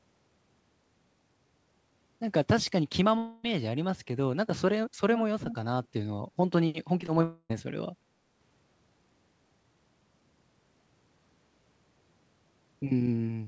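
From 3.18 to 3.45 s the speech breaks off for about a quarter of a second, most likely a long network dropout. The receiver stretches the last sound into a fading buzz for nearly the whole gap, never reaching silence, and the speech resumes further on with that stretch simply gone.

At 5.44 to 5.57 s a likely echo leak lets a short scrap of the talker come back about 334 ms late and roughly 10 dB quieter. The distinct lag marks it as a returned copy rather than room reverberation.

At 7.01 to 7.04 s and again at 7.06 to 7.10 s there are two short concealed packet losses, each losing 20 ms. They register only as brief smears or wobbles, far too short to open an audible gap, which separates them from a dropout.

Just after, from 7.24 to 7.52 s, a second long network dropout is the likely cause of another gap of about a quarter of a second. This time the filled buzz gives way to roughly 50 ms of near-silence before the sound returns. 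Throughout, nothing lies above 8 kHz, which fits a G.722 wideband call path.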